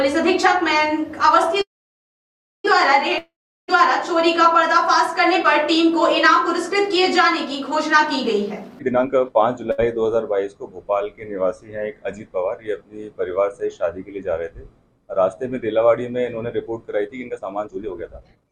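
A call audio freeze runs from 1.61 to 2.66 s. The last sound is held as a fading buzz, then about 0.98 s of silence, likely because delayed packets left the jitter buffer empty. The audio resumes where it stopped, with nothing lost.

A long network dropout follows at 3.18 to 3.70 s. The sound decays into about 0.36 s of silence, likely because no packets arrived, and about 0.5 s of audio is skipped.

A jitter buffer speed-up from 8.50 to 9.59 s cuts repeated pitch-period slices to drain surplus delay. The audio plays at 133% speed without a pitch change and sounds hurried, losing roughly 0.4 s.

A short stall from a late packet at 9.71 to 9.80 s stretches the preceding sound by 68 ms while the receiver waits. It produces a brief held, slightly buzzy moment.

A second jitter buffer speed-up runs from 17.07 s to the end at 18.52 s. At 139% speed it trims about half a second in the same rushed way.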